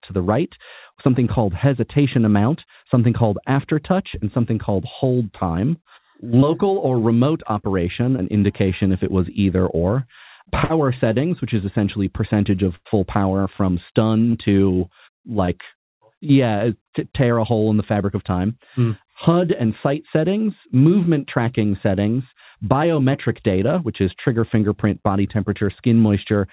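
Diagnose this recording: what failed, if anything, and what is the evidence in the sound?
Network stage, short concealed packet loss: about 20 ms of audio at a time missed the decoder, so the receiver extended the preceding sound and blended back. Each leaves a brief smear or wobble, at 6.40–6.44 s, at 8.16–8.20 s between "or remote operation" and "indication if it was", at 14.31–14.36 s after "power from", and at 15.46–15.50 s.

Network stage, burst of packet loss: consecutive packets were lost or arrived too late, so the receiver stretched the last sound while fading it, then resumed further on. This is heard as a held buzz or fading hiss followed by a jump. The first, about 60 ms, falls at 10.64–10.71 s between "it was either or" and "settings which is essentially". The second, about 100 ms, is at 12.75–12.87 s, within audio that stops at 4 kHz, as a G.711 call path does.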